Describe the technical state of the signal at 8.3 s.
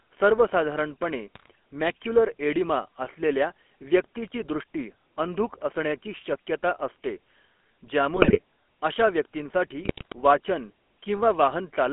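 At 8.3 s the sound sits inside a burst of GSM bit errors running from 8.16 to 8.39 s. Corrupted filter, pitch and gain parameters make the decoder produce squawks, pops and gargling with sudden level jumps. This points to roughly eleven damaged 20 ms frames. Unlike packet loss, which leaves gaps or smoothed-over repeats, the audio here keeps going but comes out wrong.

Beneath the burst, the GSM full-rate codec colours the whole clip. Its pulse-driven vocal-tract model gives speech a buzzy, gravelly roughness that fits a 13 kbps full-rate coder, inside a 250 Hz to 3.4 kHz line band. That steady grit from frame-based modelling distinguishes it from the hiss or swirl of other low-rate codecs.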